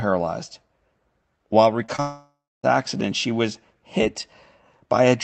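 At 1.85 s and again at 1.96 s, the speech smears briefly. These are short concealed packet losses. Each time, about 20 ms of audio failed to reach the decoder in time. The receiver patched the hole by carrying the last sound forward, then blended back into real audio. The patches last about 25 ms and 23 ms. Each is heard as a quick wobble in the speech.

Right after the second patch, from 2.00 s to 2.65 s, the sound breaks up for longer. This is likely a long network dropout. About 640 ms of audio never arrived. The receiver stretched the last sound into a buzz or hiss that fades away. The final stretch, about 270 ms, is silent. Speech then resumes from a later point, without the lost part. The audio comes through an Opus call path, with content up to about 8 kHz.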